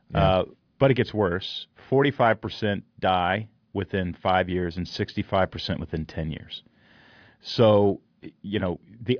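A short speech recording with no technical fault to report. There is nothing in it that needs a time or a cause.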